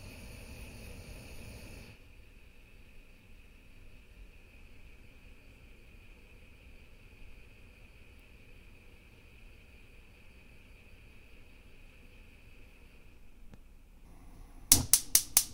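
No technical faults can be heard in this recording.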